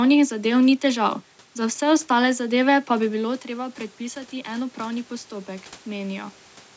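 From 3.03 to 6.41 s, automatic gain rising adds about 5 dB after an input drop of about 12 dB. Speech and room noise swell together, and the waveform slowly widens.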